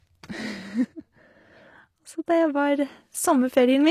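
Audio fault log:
throughout HE-AAC compression: gritty, metallic s sounds, no treble above 14.9 kHz; likely copied-up band replication, which fits roughly 24 kbps.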